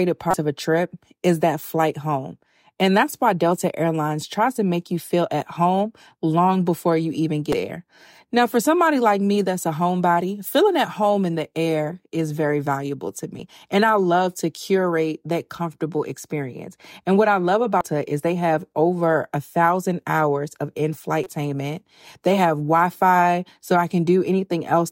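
Short glitches break through this speech clip five times: at 0.30–0.34 s just before "of a trip is", at 7.50–7.54 s after "long before you even", as single blips at 13.39 s and 17.81 s (between "what I love" and "is they have over"), and at 21.23–21.27 s. This is damaged data in a compressed stream. Corrupted bytes make the decoder misread frames, lose sync and hunt for the next frame header.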